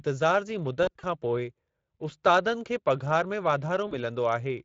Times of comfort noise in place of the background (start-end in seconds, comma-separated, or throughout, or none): none